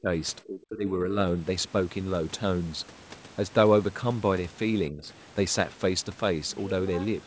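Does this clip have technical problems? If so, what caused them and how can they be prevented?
Yes. The likely cause is speech suppressed in double talk: while both sides spoke at once, the echo canceller could not separate this talker from the loudspeaker echo and attenuated everything. The speech cuts out by about 30 dB from 0.0 to 0.1 s and from 0.44 to 1.19 s, and dips by about 15 dB from 4.9 to 5.08 s. Using a headset to remove loudspeaker echo, or tuning the canceller for better double-talk detection with gentler residual suppression, would prevent it.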